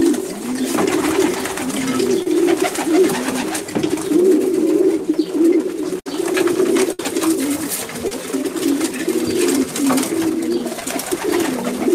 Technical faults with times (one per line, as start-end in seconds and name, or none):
2.22-2.27 short concealed packet loss
6.00-6.07 burst of packet loss
6.92-7.00 burst of packet loss
8.08-8.12 short concealed packet loss
10.80-10.82 short concealed packet loss